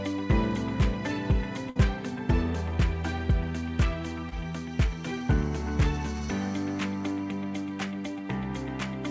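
At 1.70 to 1.77 s there's a burst of packet loss. The receiver stretched the last bit of sound for about 54 ms, fading it as a held buzz or hiss, then jumped ahead, so roughly 60 ms of the actual audio is simply gone.

Later, at 4.29 to 4.33 s, there's a short concealed packet loss. About 20 ms never arrived in time, so the decoder patched it by continuing the preceding sound and blending back in, which you hear as a quick smear or wobble over the band-limited, 8 kHz-topped audio.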